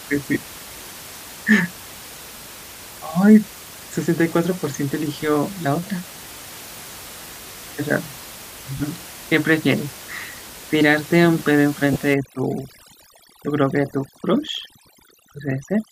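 Lost LE Audio frames occur at 0.34–0.36 s, 2.38 s, 4.60–4.62 s, 8.77–8.80 s, 10.41 s and 11.93–11.96 s, lasting 10 to 30 ms, which fits losing one to three 10 ms frames. The decoder reuses the last spectrum with scrambled signs, so each gap becomes a brief noisy smear instead of the hard silence or click of a plain dropout.

From 12.14 s to the end, overdone noise removal takes over. Bands near the estimated noise floor are pulled far down, so the room noise, which sits about 17 dB below the speech, drops and breaks up into twinkling specks. That flickering, band-by-band gating distinguishes it from the steady, slightly grainy top end that likely comes from Bluetooth LC3 compression.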